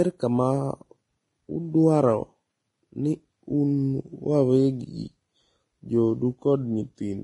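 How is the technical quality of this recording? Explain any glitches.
Heavy codec damage affects the whole recording. Throughout, the speech sounds hissy and grainy, with nothing above 10.6 kHz, likely from Vorbis compression at a low bitrate near 27 kbps, coarsely quantising treble into noise.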